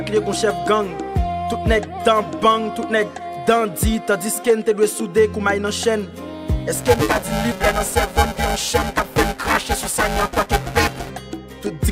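Buffer tearing sets in from 6.75 s to 11.10 s: the writer and reader of the audio ring buffer have slipped, so roughly half of each period replays audio about 7 ms old, with hard joins that produce a robotic 375 Hz buzz over the sound, which fits a 128-sample buffer.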